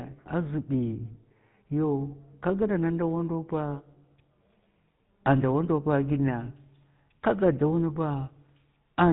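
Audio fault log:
throughout, GSM full-rate codec: the speech has a plainly audible buzzy, gravelly roughness and a dull, boxed-in tone with no air or sibilant sparkle, since nothing above 4 kHz gets through. The coder rebuilds each stretch from a model of the vocal tract fed by an evenly spaced pulse train that keeps only a third of the original excitation samples. That coarse pulse source is what makes the grain, and the sound fits the 13 kbps full-rate coder.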